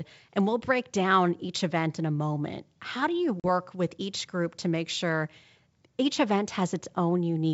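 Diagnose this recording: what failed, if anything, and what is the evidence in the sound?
Packet loss on an ADPCM call at 3.40 to 3.46 s, a network fault: after "do you", about two packets (40 ms) drop into a hard-edged silence before "with each group to". The G.722 decoder's predictor and step size then lose step with the sender's and must reconverge.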